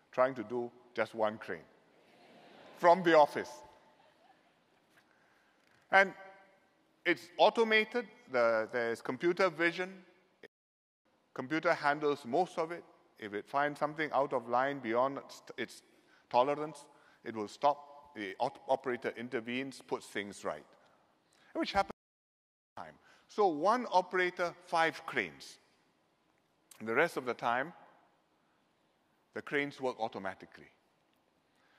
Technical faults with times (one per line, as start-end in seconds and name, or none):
10.46-11.05 playback stall
21.91-22.77 playback stall